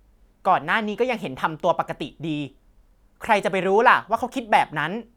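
No audible technical faults anywhere in the speech recording.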